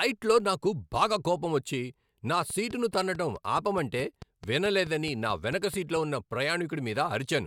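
Speech carrying a train of clicks from 2.50 s to 5.97 s, starting just after "నాకు బాగా కోపమొచ్చి నా": about fifteen near-identical ticks at a regular 4.63 per second, roughly as loud as the speech, likely from interference or a faulty connection.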